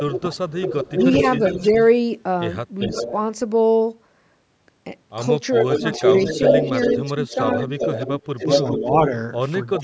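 From 0.0 to 1.87 s there is an echo leak: the far end's echo canceller likely failed to cancel its loudspeaker pickup, so a copy of the speech returns about 390 ms late, about 5 dB below the direct voice. While that leak overlaps it, from 0.0 to 0.94 s, speech is suppressed in double talk. The canceller likely can't tell the talker from the echo and turns both down, cutting the voice by up to roughly 15 dB. Another leak at 2.79 to 3.12 s returns the speech about 394 ms late, about 10 dB under it. The strongest leak runs from 5.52 to 8.96 s, with a 399 ms delay and the echo about as loud as the speech, so the voice sounds doubled. The suppression returns at 5.61 to 7.71 s and 8.36 to 9.11 s, with the voice dipping by roughly 10 dB. At the end, a brief echo at 9.76 to 9.8 s, about 402 ms late and about 10 dB down, meets one more short dip of around 15 dB from 9.77 s to the close. Throughout, the call's microphone processing passes nothing above 8 kHz.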